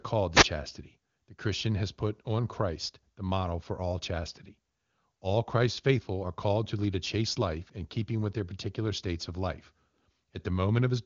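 A short swish of static from 0.33 to 0.46 s is a wireless microphone noise hit: the FM radio signal briefly faded, letting receiver noise rise.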